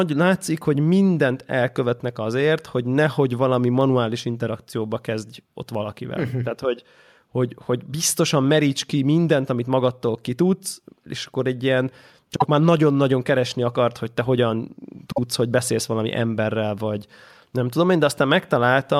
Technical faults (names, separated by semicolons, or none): dropped samples; frames out of order